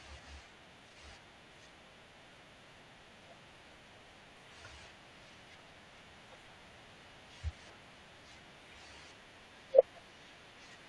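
No faults detected anywhere in the speech recording.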